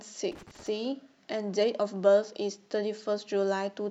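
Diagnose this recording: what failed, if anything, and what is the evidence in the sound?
The failure is in the analogue wiring: a loose connector crackle runs from about 0.32 s to 0.68 s of this speech clip, an irregular burst of scratchy crackle lasting roughly a third of a second. A worn or dirty contact is making and breaking as it shifts, so the signal is chopped on and off at random. That randomness separates it from buffer underruns or packet loss, which produce cleaner clicks or gaps.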